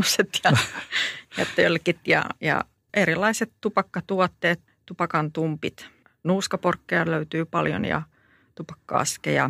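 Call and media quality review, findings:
No audible faults found on this speech clip.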